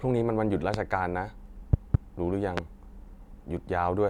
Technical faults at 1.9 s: loud pop

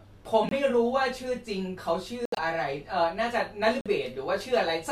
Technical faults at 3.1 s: none

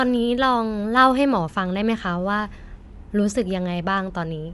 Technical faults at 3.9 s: Bluetooth LC3 compression

